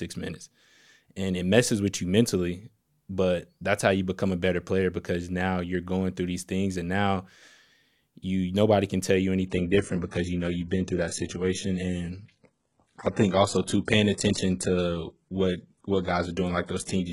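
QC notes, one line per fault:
9.47–17.13 s, adaptive stream at a lower bitrate: the speech quality drops suddenly with no gap, as the player switches to a much thinner version of the stream, consistent with a move from roughly 96 kbit/s AAC to 12 kbit/s HE-AAC. Nothing remains above 11.1 kHz. On a spectrogram the top edge drops abruptly to a flat ceiling and the high band loses detail, while the waveform stays continuous across the switch.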